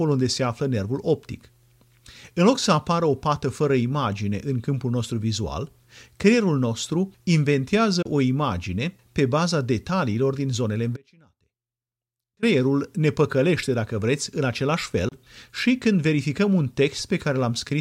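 At 8.02 s, just before "o imagine pe baza", the speech drops out for about 27 ms. This Bluetooth dropout likely comes from two packets arriving too late. From 10.97 s to 12.43 s, between "baza detaliilor din zonele" and "ne păcălește dacă vreți", the voice cuts to a faint sound about 35 dB down for nearly 1.5 s. This audio dropout to a faint residue was likely caused by the signal being lost while the path after the break stayed live. At 15.09 s, between "dacă vreți în același" and "și când verificăm un", another 27 ms hole is again likely a Bluetooth dropout.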